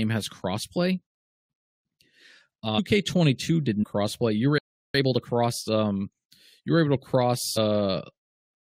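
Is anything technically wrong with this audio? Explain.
Yes, there are three kinds of fault in this speech clip.

Compressed frames skipped: at 2.78 s, at 3.82 to 3.84 s, and at 7.56 s, just after "you were able". Whole coded frames, each 23.2 ms long, go unplayed because they are missing or the decoder rejected them. The speech jumps ahead by roughly 300 ms, 400 ms and 150 ms respectively.

Playback stall: from 4.58 to 4.95 s the output goes silent mid-flow for about 360 ms. This is likely the player running out of buffered data or its thread being blocked. Speech resumes where it stopped.

Time-compressed catch-up: from 4.95 to 6.37 s, just before "you were able", the player cuts and cross-fades small segments to clear its backlog. Speech runs at 1.25 times normal speed without a pitch shift.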